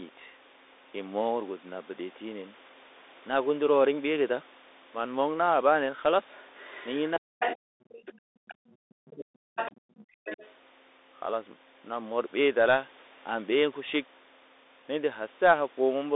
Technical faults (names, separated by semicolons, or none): Bluetooth CVSD headset codec; other side's voice leaking through; speech suppressed in double talk; background gated by the echo canceller